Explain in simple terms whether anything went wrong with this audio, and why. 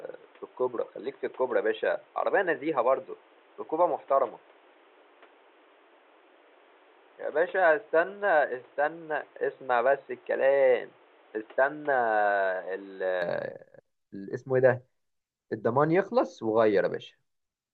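Input switched to a poorer device, from the start until 13.2 s: the speech sounds muffled and boxy, with nothing above 3.9 kHz and faint extra background noise. It likely came from a lower-quality microphone or headset, then clears at 13.2 s with no gap or loudness jump.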